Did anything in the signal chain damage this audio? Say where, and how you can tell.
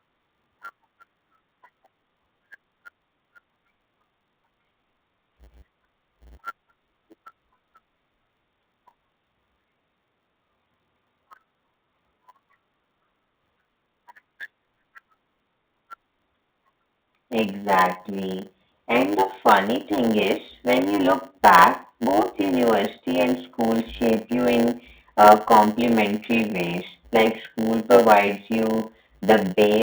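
Yes, a block size mismatch (padded) in the driver or buffer stage. A steady 100 Hz buzz runs throughout and the speech plays at about 0.919 times normal speed with unchanged timbre. Short zero-filled gaps in each block cause both, and the steady timbre rules out a sample-rate error.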